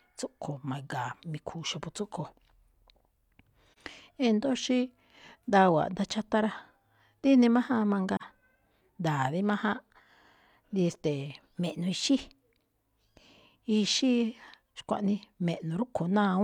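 At 3.72 to 3.78 s the speech drops into a brief, soft-edged silence. This is AAC frame loss with muting. About 43 ms of audio is zeroed, which fits one missing frame. Overlapping windows fade it out and back in.

From 4.55 to 5.42 s the speech slows by about 6% and drops about 110 cents. This is a drift correction step, likely a clock-matching rate change.

At 8.16 to 8.22 s another muted hole of about 43 ms appears.

From 11.53 to 12.47 s the speech speeds up about 6% and rises about 103 cents.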